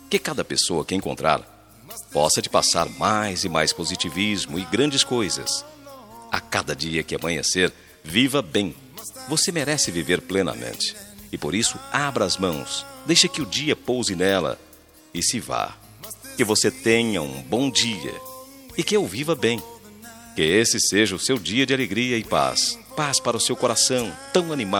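From 22.99 s to the end of the clip at 24.8 s, a Bluetooth SBC bit pool drop dulls the treble and adds gritty noise. The link starved the encoder of bits, leaving top sub-bands empty and the rest coarsely quantised, which fits a fall from bit pool 28 to about 13.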